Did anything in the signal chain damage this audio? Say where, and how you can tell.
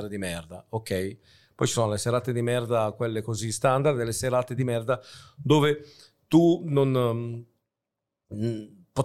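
No, nothing in the signal chain damaged this audio.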